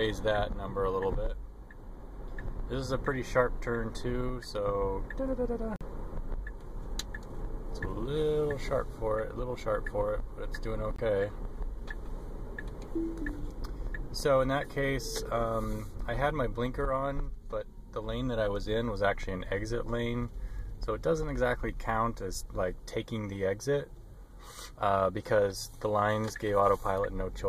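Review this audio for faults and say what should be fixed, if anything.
Corrupt frame muted at 5.76 to 5.83 s and again at 10.96 to 11.00 s: the decoder rejected damaged compressed frames and the player substituted silence, cutting the audio off abruptly for about 66 ms and 42 ms, each gap consistent with several consecutive frames. Timing stays intact around both holes. A waveform shows a sudden drop to a flat line; a spectrogram shows a clean vertical blank band. Fix this by protecting the stream with checksums and error correction or retransmission.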